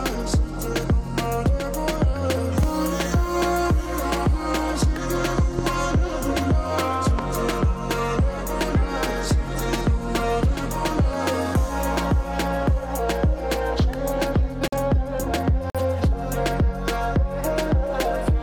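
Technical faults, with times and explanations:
2.63–2.66 s, 5.59–5.61 s and 7.19–7.21 s, loud pop: single sharp clicks about 10 dB above the sound, which carries on underneath. This is likely a voltage pulse from a switch or static, not a dropout.
14.68–14.77 s and 15.70–15.80 s, corrupt frame muted: abrupt silent holes of about 0.1 s where damaged compressed frames were discarded. The sound stops rather than being overlaid, and timing is kept.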